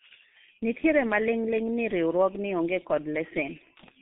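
Throughout, the speech carries heavy G.723.1 codec damage, which fits a roughly 6 kbit/s setting. Nothing survives above 3.8 kHz, and the band runs from 150 Hz to 3.7 kHz, so the speech sounds muffled and hoarse, with smeared consonants. A spectrogram shows a hard ceiling and blotchy harmonics.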